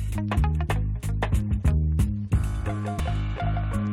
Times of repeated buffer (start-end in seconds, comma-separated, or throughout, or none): none